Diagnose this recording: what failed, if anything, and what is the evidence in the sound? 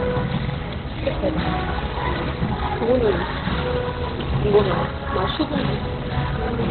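The codec stage failed. For the whole clip the sound is muffled and hoarse, with nothing above 4.3 kHz, and what remains is heavily degraded. On a spectrogram the energy stops at a flat ceiling near 4.3 kHz from start to finish, and the band below looks coarse and smeared. The likely cause is Opus compression in its narrowband speech (SILK) mode. The encoder discards the upper band and models what is left crudely, which fits a starved rate of about 12 kbps.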